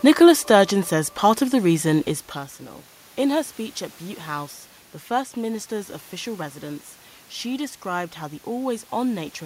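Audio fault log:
No fault in the audio.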